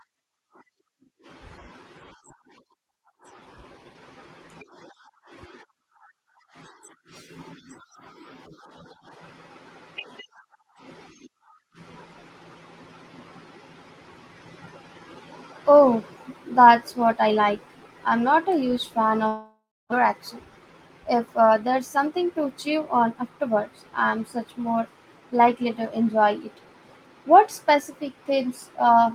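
From 19.27 to 20.09 s the speech breaks off: the last sound is stretched into a fading buzz for about 0.65 s, then about 0.29 s of near-silence, and roughly 0.4 s never returns. That's likely a long network dropout.

Then come two jitter buffer speed-ups, at 21.13 to 23.57 s (105%, around 150 ms trimmed) and 24.03 to 24.82 s (106%, around 50 ms). The receiver clips tiny pitch-period slices to drain the backlog, so the speech sounds slightly rushed at the same pitch.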